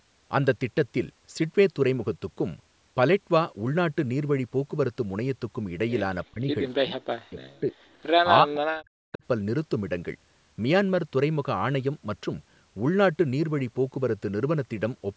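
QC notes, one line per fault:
6.3–6.48 s, 6.8–7.78 s and 8.41–9.22 s, speech suppressed in double talk: the voice gets pushed down hard three times, by around 40 dB at its deepest, for about a fifth of a second, then roughly a second, then well under a second. It ducks and chops rather than fading naturally. That's likely an echo canceller hearing the far side talk at the same moment and clamping down on everything, this talker included.
6.7–6.74 s, echo leak: a brief, very faint scrap of a delayed copy of the voice sneaks through, trailing the original by 310 ms and sitting roughly 40 dB under the speech. It's likely leftover loudspeaker pickup on the other end that the echo canceller didn't fully remove and that got sent back down the line, landing right between the first two suppression dips.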